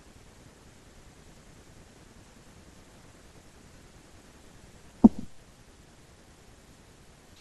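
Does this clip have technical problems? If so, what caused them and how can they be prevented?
Yes. At 5.46 s there is damaged data in the compressed stream. The decoder misreads the corrupted bytes, loses sync and blurts a brief blip. Checksummed transfer and error-checked storage would prevent it.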